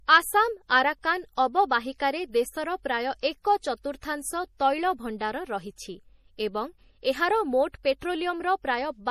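MP3 compression runs throughout the speech, with nothing above 15.1 kHz. This is likely a low-bitrate encode, around 40 kbps judging by the damage: starved of bits, the encoder drops weak frequency lines frame to frame, leaving a plainly audible watery swirl and chirpy sibilants.

Pre-echo appears from 3.20 to 3.23 s, between "ଦେଶର ପ୍ରାୟ" and "ଏକ ଚତୁର୍ଥାଂଶ ତୈଳ". A sharp onset fell late in a transform block, so quantisation noise sized for it spread about 25 ms backward into the quiet gap, heard as a brief hiss before a softened, smeared attack.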